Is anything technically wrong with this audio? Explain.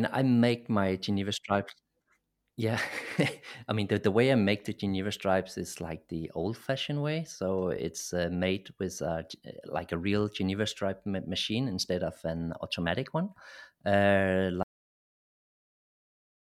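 Yes: the recording has a cut-off end. At 14.63 s the final buffers of speech were never written, so the capture stops partway through a sound. Instead of decaying naturally, the audio drops instantly to digital silence and stays there for the remaining stretch of the clip.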